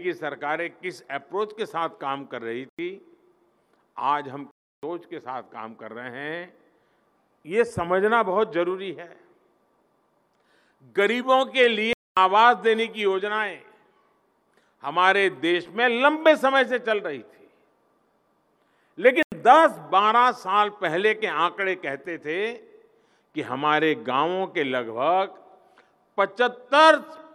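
At 2.69 s the sound drops to a block of digital silence for 93 ms. The same fault returns at 4.51 s for 319 ms, at 11.93 s for 237 ms, and at 19.23 s for 93 ms. Each time, samples were replaced by zeros with no fade. The two short holes fit a 4096-sample buffer that was not filled in time. The longer ones sound like clear gaps in the audio.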